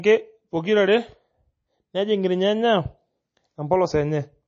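A likely low-bitrate MP3 encode, consistent with roughly 32 kbps, runs throughout this speech recording: starved of bits, the encoder removes everything above 8.2 kHz and drops weak frequency components frame by frame, leaving dull, watery, swirling MP3 compression damage and chirpy s sounds.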